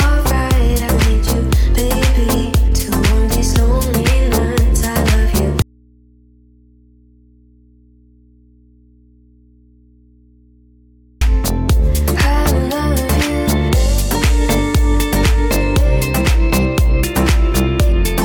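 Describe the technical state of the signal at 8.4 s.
At 8.4 s the signal sits inside an audio dropout to a faint residue, running from 5.62 s to 11.21 s. The wanted sound is gone for about 5.6 s. Only mains hum remains, roughly 35 dB below normal level. This is likely from a broken link upstream while the input stayed live.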